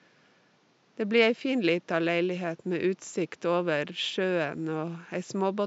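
Nothing goes wrong anywhere in this speech, and the only extra sound is the room's own background noise, sitting about 37 dB below the talking.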